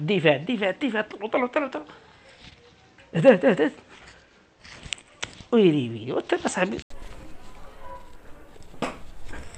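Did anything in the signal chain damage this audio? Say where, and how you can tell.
Yes. For the first 6.9 s the sound is dull, with nothing above 8.2 kHz, a few dB quieter and with its own faint background noise. An 80 ms gap then opens onto fuller sound, likely the input switched to a poorer device at the driver stage and then back.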